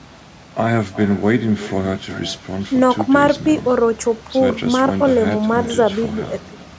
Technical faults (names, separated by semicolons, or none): echo with no canceller